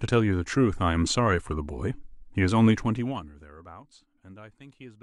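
A speech clip in which, from 2.76 to 3.56 s, a fine ticking or zipping rides on the sound as the level drops by roughly 20 dB. This is zipper noise: the gain is lowered in unsmoothed steps of 1 dB, at about fifty a second, and each abrupt jump leaves a small click in the waveform. Those clicks, strung together over the 0.8-second fade, produce the buzzy zipper texture instead of a clean fade.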